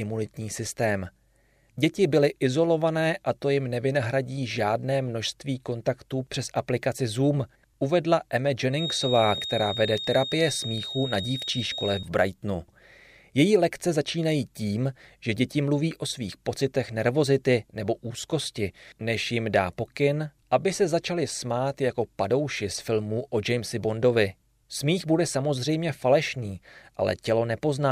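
From 8.69 to 12.09 s a feedback whistle sits about 10 dB under the speech: a thin, steady tone at 3.7 kHz, likely from a loudspeaker-to-microphone loop held just at feedback. A spectrogram shows a narrow horizontal line; the waveform shows little.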